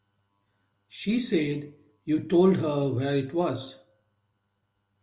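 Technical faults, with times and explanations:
No technical faults are audible.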